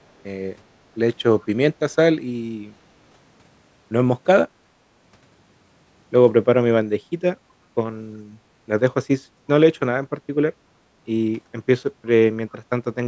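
At 1.41 to 1.46 s a brief, very faint scrap of delayed speech surfaces, sitting roughly 35 dB below the main talker and trailing it by about 365 ms. This is an echo leak, most likely from a far end playing the call over a loudspeaker, where the echo canceller let a fragment of the microphone's pickup slip through and return. On a spectrogram it appears as a ghostly repeat of earlier harmonic patterns.

From 10.78 to 10.91 s the room sound dips and then recovers, a drop of about 13 dB affecting roughly 150 ms in total. This is background gated by the echo canceller: while loudspeaker playback was detected, the canceller pulled the microphone level down hard, then released it. On the waveform the noise floor visibly narrows into a short trough, and on a spectrogram the background texture, capped at 8 kHz by the call's microphone processing, thins into a brief darker band before filling back in.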